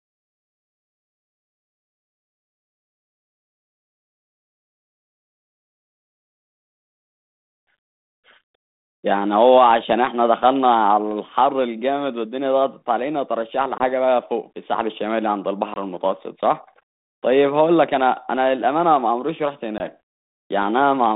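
Packet loss on an ADPCM call cuts the speech at 13.78 to 13.85 s, 15.74 to 15.78 s and 19.78 to 19.81 s, each a hard-edged 20 ms gap of silence, about a single packet. Over the 32 kbit/s G.726 link, whose band runs from 150 Hz to 3.7 kHz, the decoder's adaptive predictor and step size lose track of the sender's during each hole, so the speech resumes slightly distorted before settling.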